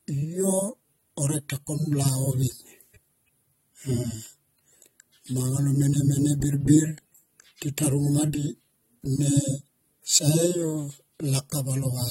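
AAC compression runs throughout: nothing above 16 kHz, speech dull and smeared with fizzy texture, likely coarse AAC-LC quantisation, fitting a bitrate near 32 kbps.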